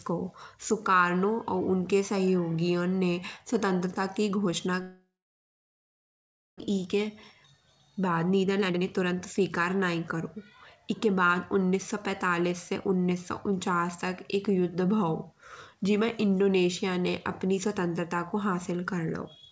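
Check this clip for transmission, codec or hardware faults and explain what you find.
Two transmission faults stand out, both tied to a network interruption on a call path whose audio stops at 8 kHz, consistent with 64 kbps G.722 coding.

Long network dropout, 4.82 to 6.62 s, right after "ने स्वतंत्रता की घोषणा". The likely cause is a stall in packet delivery, leaving the receiver with nothing to play for close to 1.8 s. It stretches the last sound into a brief fading buzz, then goes quiet for about 1.5 s. When audio resumes, roughly a second of speech is gone and playback sits about 0.7 s further behind than before.

Jitter buffer speed-up, 6.70 to 13.31 s, ending just before "उन्चास तक एक्क". The backlog built up by the dropout left the buffer holding more audio than its target. To shrink it, the receiver repeatedly cut out tiny slices of a pitch period or so, about 0.7 s in total. Speech runs at about 111% of normal pace while the pitch stays unchanged, so this stretch sounds rushed.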